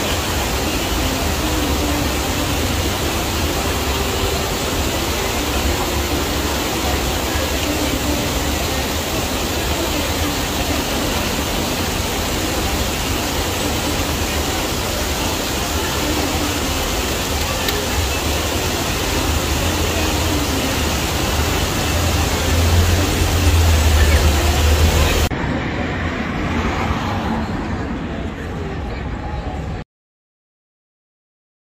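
At 29.82 s the audio hits a cut-off end: the sound stops mid-event and falls straight to digital silence, which lasts the remaining 1.8 s or so of the clip. The final stretch of buffers was never written or played out, so nothing decays naturally. On a waveform the trace ends abruptly into a flat line. On a spectrogram every frequency band stops at one vertical edge, followed by a blank region with no tail.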